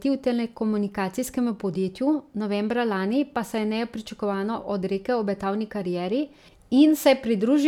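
Speech recording with no audible technical faults anywhere in the clip.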